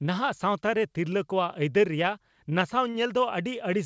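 At 2.90 to 2.96 s, a short stall from a late packet stretches the sound by about 43 ms. Nothing is lost, but it drags briefly with a slight buzz or dip.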